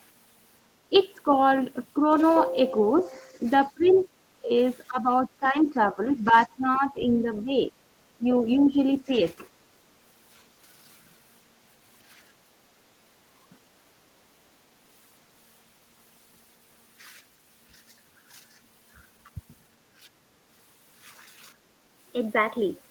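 Faint scraps of a second voice at 2.98 to 3.03 s, 3.84 to 4.05 s and 8.66 to 8.70 s are likely the other side's voice leaking through, where an echo canceller left loudspeaker sound in the microphone. They sit well below the talker, quietest at 8.66 s. Unlike the dips, this adds sound rather than removing it.

Between 3.1 and 7.55 s, and again at 8.17 to 9.13 s, the talker's own voice dips by around 15 dB in pieces, about two seconds in total in the first stretch. This is likely speech suppressed in double talk: with both sides talking, the canceller could not separate them and attenuated everything.

At 21.55 to 21.88 s, the room background drops by about 10 dB. This is background gated by the echo canceller, which clamped the microphone while the loudspeaker played.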